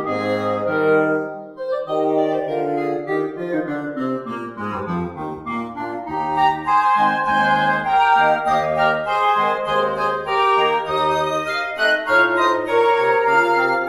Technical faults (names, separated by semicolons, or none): channels drifting apart